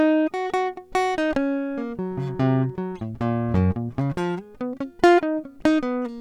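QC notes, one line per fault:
Nothing stood out on listening to this music.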